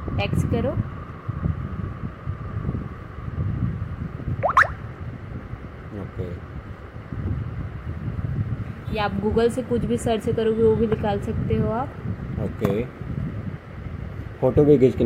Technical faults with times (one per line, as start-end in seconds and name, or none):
7.43 compressed frames skipped